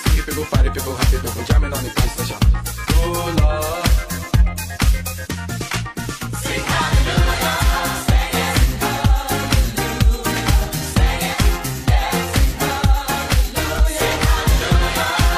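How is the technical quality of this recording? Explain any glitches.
The recording has one recurring fault: damaged data in a compressed stream. It appears five times, at 2.0, 5.30, 7.57, 11.29 and 13.75 s, each lasting about 0.05 to 0.06 s. Corrupted bytes make the decoder misread frames and hunt for the next valid header. Each event is heard as a brief disruption in the audio.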